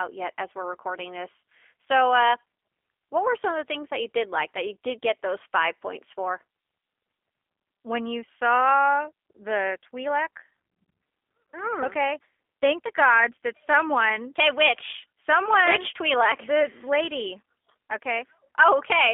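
From start to finish, the speech has passed through a G.729 codec, most likely the G.729A variant. The encoder discards the original waveform and rebuilds each 10 ms frame from a vocal tract filter, a pitch predictor and a handful of pulses, at a rate that fits 8 kbit/s. The band is confined to roughly 300 Hz to 3.5 kHz, so the voice sounds thin and telephone-like, and the damage is plainly audible as a rough, buzzy, synthetic edge.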